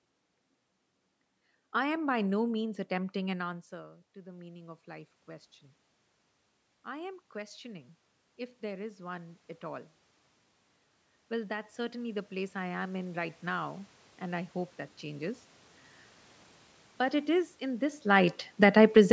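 A speech clip with automatic gain rising three times: from 2.59 to 5.18 s after "I am by no", 6.85 to 9.97 s, and 11.29 to 15.49 s, each lifting the level by about 6, 6 and 5 dB. In the first two, the input has dropped by about 17 dB and the control climbs back over several seconds. The room noise swells along with the voice, which separates it from the talker simply moving, as happens around 3.5 s. Automatic gain falling follows from 18.06 to 19.08 s after "it is in this", where the level sinks by about 6 dB over a second. The background sinks with it, so this is the control backing off, not just the talker moving near 18.0 s. The call's microphone processing caps the band at 8 kHz.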